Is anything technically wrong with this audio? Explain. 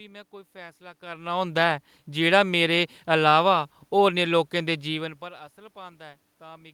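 No, nothing here points to a technical fault.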